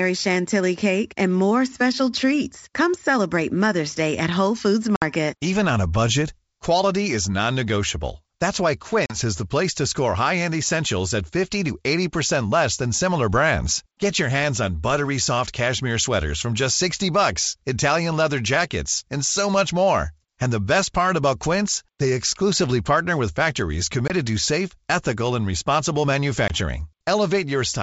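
Hard-edged holes break the speech at 4.96 s (60 ms), 9.06 s (40 ms), 24.08 s and 26.48 s (20 ms each), and the sound comes back with brief, slight distortion that settles within tens of milliseconds. This is packet loss on an ADPCM call, about three, two, one and one packets dropped and filled with silence. The decoder's adaptive predictor and step size drift from the sender's, so it needs a moment to resynchronise.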